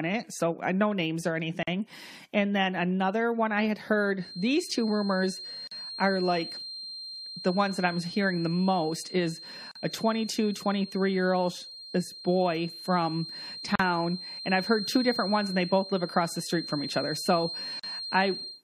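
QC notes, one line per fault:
1.63–1.67, 5.67–5.71, 9.71–9.75, 13.75–13.79, 17.79–17.84 s: gap at a join of encoded pieces. Short dropouts of about 40 ms (the first, right after "uh no names or", nearer 44 ms) every 4 s, with smeared edges. The speech resumes where it stopped, which points to separately encoded chunks joined with their encoder delay and padding left in.
4.15 s to end: feedback whistle. From just after "another one I had", a thin, steady 4.2 kHz tone sits behind the speech, around 15 dB down, swelling and fading slowly in level but never building up. That's likely a speaker-to-mic loop hovering right at the edge of feedback.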